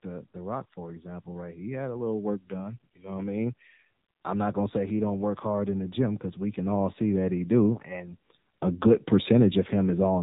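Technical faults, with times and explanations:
Throughout, AMR narrowband mobile codec: the speech is band-limited with nothing above about 3.8 kHz, and the low bitrate, which fits 7.4 kbps AMR-NB, rebuilds each 20 ms frame from a vocal-tract model fed by sparse pulses, giving a plainly buzzy, synthetic timbre.
0.06 to 7.86 s, automatic gain rising: the level climbs steadily by about 14 dB over nearly eight seconds, ending just before "and a good". Voice and background swell together because the gain control judged the input too quiet and raised it gradually.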